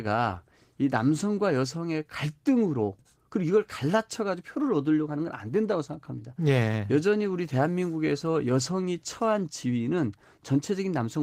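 No technical faults occur at any point in the speech, so there is nothing to describe in time order.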